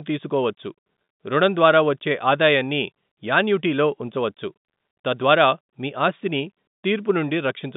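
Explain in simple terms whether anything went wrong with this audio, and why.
Packet loss with pitch repetition happens at 1.05 to 1.08 s, just before "రుణం ద్వారా వచ్చే ఆదాయాన్ని". For about 30 ms a small piece of the speech went missing on its way across the network, a gap that fits one lost packet. Instead of leaving a hole, the receiver filled it by repeating the last bit of voice it had. Because the gap is so short, it sounds like a brief, slightly held buzz before the speech carries on.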